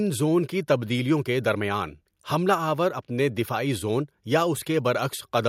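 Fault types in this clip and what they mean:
Nothing to flag here; the speech comes across without any audible technical faults.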